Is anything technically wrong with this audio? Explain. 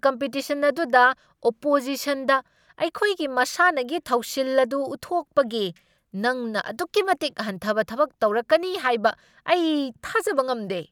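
No, no technical faults heard.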